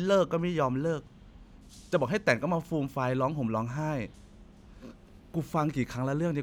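Nothing goes wrong anywhere in this speech recording, so there's no fault to point to at any moment in it.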